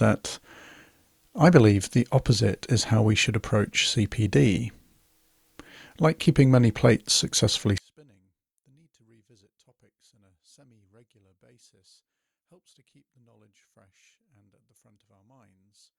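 From 7.78 s, just after "keeping many plates successfully", the speech drops by about 40 dB and stays down until the end. The likely cause is one channel inverted: reversed polarity on one side cancels the shared content in the mono sum, leaving only the difference between channels.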